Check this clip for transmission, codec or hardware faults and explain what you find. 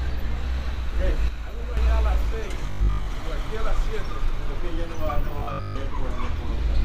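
Two kinds of fault show up here, one level drop and two robotic patches.

From 1.28 to 1.77 s the sound suddenly falls by about 6 dB, then comes back. That's the signature of one channel dropping out: a stereo channel was likely lost, so after the mono sum only half the shared content remains.

Between 2.67 and 3.07 s, and again from 5.39 to 5.77 s, there's robotic sound from repeated short buffers. Roughly two-thirds of each stretch is the same short slice looped, likely because fresh audio arrived too late. That imposes a rigid 50 Hz buzz, which fits a 20 ms buffer.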